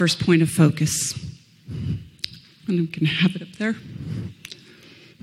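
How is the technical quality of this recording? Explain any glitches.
The technical quality of this recording is sound, with no glitches to explain.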